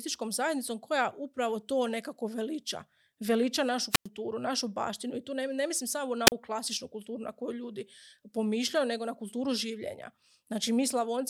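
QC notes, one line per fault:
3.90–4.08 s and 6.26–6.32 s, wireless microphone squelch dropout: a short surge of hiss, then a gap of near silence lasting about 99 ms in the first and 40 ms in the second, before the speech resumes, at "našu baštinu i tu" and then at "klasičnu kulturu na koju" after "ne mislim samo na". The analogue FM radio link weakened until the receiver's squelch gated the output shut, briefly letting noise through before muting.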